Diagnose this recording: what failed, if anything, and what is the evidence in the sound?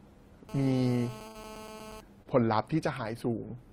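Analogue stage: GSM phone buzz from 0.49 to 2.01 s. A steady, raspy 217 Hz buzz sits about 14 dB below the speech. The wiring rectifies the radio bursts of a nearby phone.

Network stage: a burst of packet loss at 1.27 to 1.37 s. About 73 ms of the last sound is held and fades. Then 80 ms of speech is simply gone.

Network stage: short concealed packet loss at 2.23 to 2.27 s. A brief 27 ms smear bridges the gap. About 20 ms of real audio never arrived.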